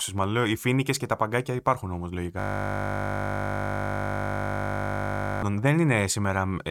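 A system hang loop runs from 2.40 to 5.43 s in this speech clip: a frozen driver left the hardware replaying one 20 ms buffer, producing a steady 50 Hz buzz.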